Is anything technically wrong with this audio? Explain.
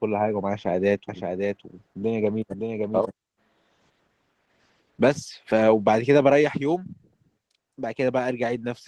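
Yes, two things. Throughout, there's clear Opus voice compression. The speech sounds hoarse and a bit robotic because the SILK predictive coder handles the lower band coarsely while a CELT layer covers the top. The damage fits a low bitrate of around 16 kbps.

From 1.09 to 3.11 s there's a doubled audio track. A second full-band copy runs about half a second behind, roughly 5 dB quieter and with no room colour. It cuts in and out abruptly. That's likely a slower second capture path mixed back in.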